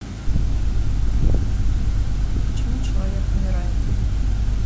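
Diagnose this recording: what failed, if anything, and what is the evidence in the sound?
Low bit depth without dither runs through the whole speech recording. A grainy distortion tracks the level, roughening quiet syllables and word tails, with the error around 30 dB below the signal. The likely cause is a sample-format conversion step that rounded the audio to about 7 bits with no dither. Because the rounding error follows the waveform rather than forming a steady hiss, it is heard as gritty distortion that shifts with the speech.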